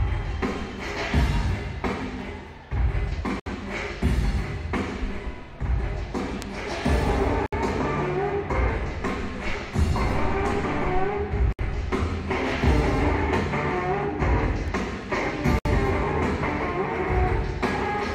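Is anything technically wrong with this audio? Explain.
Yes, there are two kinds of fault.

Gaps at a join of encoded pieces occur at 3.40, 7.46, 11.53 and 15.59 s, repeating every 4.0 s. Each gap lasts about 64 to 66 ms. The audio appears to have been encoded in 4-second pieces and joined without trimming, so each encoder's start-up delay and padded final frame remain. The sound drops out abruptly, with edges smeared by the codec, then resumes from where it stopped.

Bit error spikes appear at 4.18, 6.42 and 14.68 s. Each is a single sharp tick, broadband and unrelated to the surrounding sound. A flipped bit in memory or on a digital link makes the sample value jump by a power of two and immediately return. At 4.18 and 14.68 s only one sample is affected. At 6.42 s the error spans three consecutive samples, which still registers as one tick.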